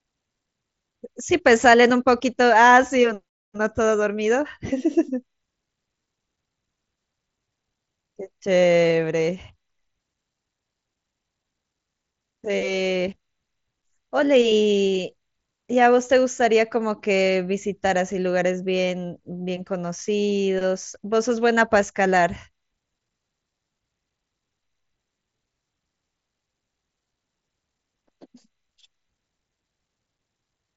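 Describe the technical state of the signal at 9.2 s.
At 9.2 s the speech comes through intact with no fault, carried by the Bluetooth mSBC headset codec with its band limit near 7.7 kHz.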